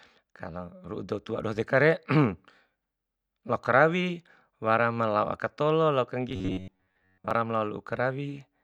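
Robotic sound from repeated short buffers runs from 6.29 to 7.31 s, where the speech collapses into a rigid, metallic buzz near 93.8 Hz. That pitch fits a 10.7 ms segment being looped, likely because fresh audio stalled and most of this stretch was replaced by repeats.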